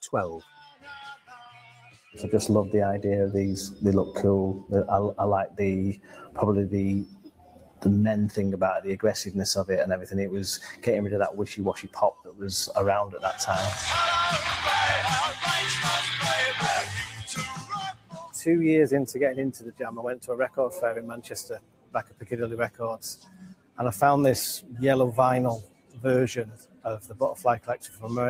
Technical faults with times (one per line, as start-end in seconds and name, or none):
0.00-28.30 noise suppressor applied to music or sounds
0.05-2.16 sound cut by the noise suppressor
5.48-6.38 sound cut by the noise suppressor
7.05-7.85 sound cut by the noise suppressor
9.97-10.14 sound cut by the noise suppressor
10.73-13.23 sound cut by the noise suppressor
16.85-18.34 sound cut by the noise suppressor
19.53-23.79 sound cut by the noise suppressor
25.62-28.30 sound cut by the noise suppressor